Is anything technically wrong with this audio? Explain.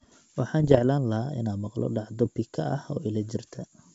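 Yes. Bit errors on an ADPCM link hit from 0.60 to 0.81 s, before "lahaa inaan maqlo dhacdo", and from 2.24 to 2.28 s, between that phrase and "pika ah", over an otherwise clear G.722 wideband path. The first burst is heavier, around one percent of bits, and the second lighter, around half a percent. Each flipped bit corrupts the decoder's predictor and step size, so the error rings on as pops and rough, level-jumping bursts. These show as spiky waveform excursions and broadband vertical smears on a spectrogram.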